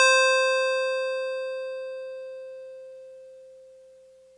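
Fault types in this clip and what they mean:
Nothing to flag here: the music comes across without any glitches, dropouts or other faults worth noting.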